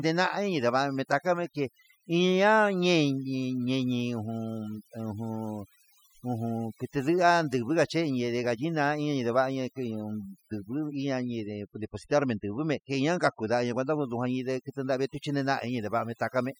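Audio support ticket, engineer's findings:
Overdone noise removal, whole clip. Background reduced, breaking into twinkling specks. Noise reduction set too strong: bins near noise estimate gated off, quiet speech detail lost. Spectrogram: blank gaps, isolated flickering dots, ragged thinned harmonics.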